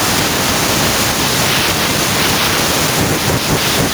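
Nothing technical goes wrong in this speech clip; the only extra sound is the room's own background noise, sitting about 45 dB below the voice level.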